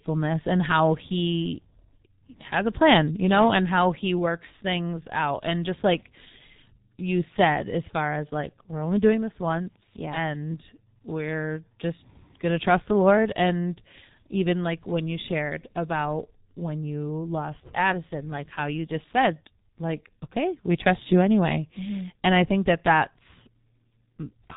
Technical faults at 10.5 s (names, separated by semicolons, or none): G.723.1 codec